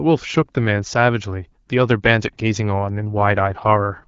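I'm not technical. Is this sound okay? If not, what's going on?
No. From about 3.15 s to the end, the speech turns rougher and more synthetic. This is an AMR rate drop: the phone network switched the HD Voice call to a lower quality setting, likely to protect a weak signal.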